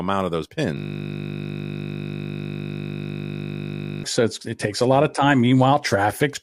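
A speech clip with a system hang loop from 0.77 to 4.04 s, just after "of those": a 20 ms slice of audio repeats exactly, producing a steady 50 Hz buzz. The driver stalled while the hardware kept cycling one short ring buffer.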